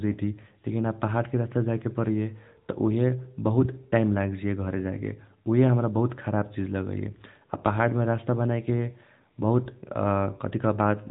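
From start to finish the speech runs through the AMR narrowband mobile codec. Nothing above about 3.8 kHz survives, so it sounds thin and boxed. A pulse-driven vocal model rebuilds each frame, giving a plainly audible buzzy, synthetic edge that fits a mid-rate mode near 10 kbps.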